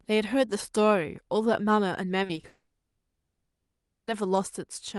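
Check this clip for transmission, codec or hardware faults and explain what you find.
Two transmission faults sit back to back around the middle of the speech, heard over an Opus call path whose content stops near 12 kHz.

From 2.23 to 2.45 s, repeated packet loss (robotic sound): four short gaps, none longer than 20 ms, are patched by repeating prior sound, making choppy speech with pieces missing. A spectrogram shows smeared, repeated slices.

From 2.47 to 4.09 s the audio is replaced by a continued, fading buzz or hiss, with a likely long network dropout behind it. The waveform shows a 1.6 s stretch of concealment fading away before speech resumes.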